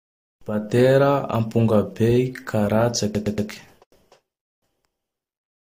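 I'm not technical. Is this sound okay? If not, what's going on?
No. At about 3.14 s the speech stutters, with the same 0.12-second snippet played three extra times until 3.49 s. This is repeated frames: a chunk of the compressed audio was sent or saved more than once, adding about 0.35 s.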